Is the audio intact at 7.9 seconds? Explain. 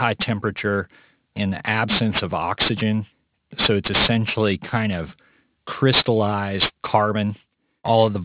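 No. Aliasing runs through the whole clip, 7.9 s included: the speech was resampled down without a guard filter, which fits an 8 kHz rate, so content above 4 kHz folds back as strong, gritty, metallic sibilants rather than the plain dullness of a low-pass cut.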